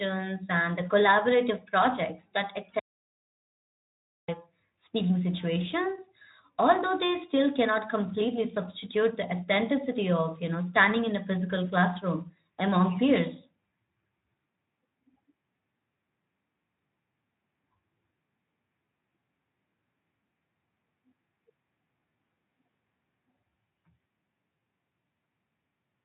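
At 2.79 s the speech cuts out abruptly and the signal drops to digital silence until 4.28 s, an audio dropout to silence lasting about 1.49 s. The gap holds no room tone or noise floor at all, which points to the input likely being lost while the recorder kept writing silence. Whatever was spoken in that span is unrecoverable. The surrounding speech, carried through a Speex codec with nothing above 3.8 kHz, resumes.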